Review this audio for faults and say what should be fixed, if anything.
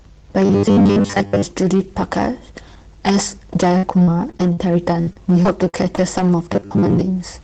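The speech has a harsh, gritty edge on its loud syllables throughout the clip. This is hard clipping. The signal was driven about 9 dB past the limit of a stage in the chain, so around one sample in twenty has its peak shaved flat. Those flattened tops create high harmonics, which are heard as crackle and fuzz. Because the call path passes audio up to 8 kHz, much of that grit reaches the listener. To prevent it, lower the input gain or add a limiter ahead of the stage that overloads.

From 0.45 to 1.45 s, and again from 6.53 to 7.01 s, the speech becomes a rigid, metallic buzz fixed at 100 Hz that only loosely follows the syllables. This is robotic sound from repeated short buffers, and the likely cause is audio arriving too seldom. The software filled each gap by replaying the last slice, which fits a 10 ms buffer, while the real audio was skipped. About 70 percent of the first stretch and half of the second were repeats. 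To prevent it, make sure the capture or playback thread delivers buffers on time, with enough buffering headroom.

Between 3.77 and 6.19 s the speech turns choppy and robotic, with short pieces dropping out in quick succession. This is repeated packet loss. Packets went missing again and again, and each hole, the longest about 59 ms, was patched by extending the preceding sound. Roughly 340 ms went missing and was concealed, about 14 percent of that stretch, and the next loss arrived before the sound could settle. To prevent it, stabilise the network path or enable forward error correction and a deeper jitter buffer.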